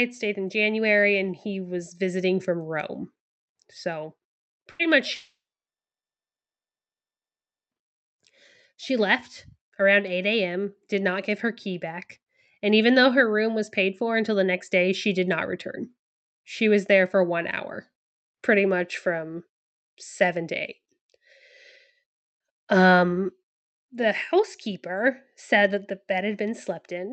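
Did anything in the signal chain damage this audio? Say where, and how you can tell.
Yes, both at the network stage. From 4.71 to 4.82 s the last sound is briefly held and fades, then the speech resumes with a piece skipped. That is a burst of packet loss: about 80 ms never arrived, and the receiver stretched the last sound over the gap.

From 5.15 to 7.74 s the speech gives way to a brief fading continuation of the last sound, then about 2.35 s of silence before it returns with that stretch missing. This is likely a long network dropout: nothing arrived, the concealment faded out, and the lost audio never played.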